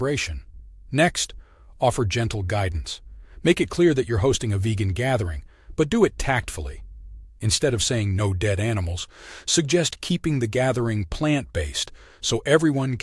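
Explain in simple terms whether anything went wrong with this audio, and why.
Nothing went wrong with this speech recording: no faults are audible anywhere in it.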